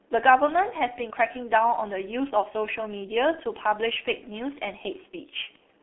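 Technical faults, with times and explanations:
Throughout, G.723.1 codec: the speech sounds muffled and hoarse, with blurred consonants, which fits heavy coding near 6 kbit/s in 30 ms frames whose voice model updates slowly. A spectrogram shows energy held between 250 Hz and 3.5 kHz, and nothing above 3.8 kHz.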